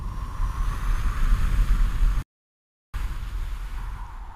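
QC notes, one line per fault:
2.22–2.94 s, playback stall: the sound cuts out abruptly mid-flow and the output stays silent for about 0.71 s before resuming. There is no fade or decay into the gap, only a hard drop to silence and an equally hard restart. The likely cause is the player running short of buffered data or its output thread being blocked, so nothing reached the output until it recovered and resumed.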